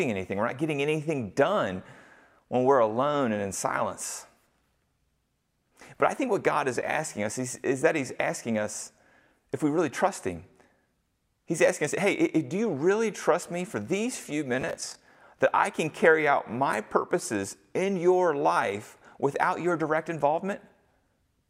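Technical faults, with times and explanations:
14.61 to 15.15 s, processor overload crackle: right after "me for these few", a gritty tearing rides on the speech for about half a second, ending before "that I can carry". The processor missed a run of short deadlines, roughly fifteen buffers of about 10 ms, and each gap was filled with stale audio whose hard edges click.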